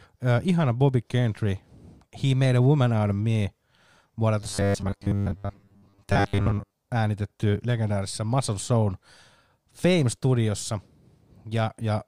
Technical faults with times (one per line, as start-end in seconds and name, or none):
4.40-6.73 robotic sound from repeated short buffers